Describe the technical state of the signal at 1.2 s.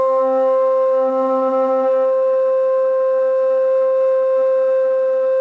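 Wrong sample rate at 1.2 s, as across the whole clip. Playback runs at two-thirds speed, fitting 24 kHz audio played at 16 kHz, so everything drops about 7 semitones and drags.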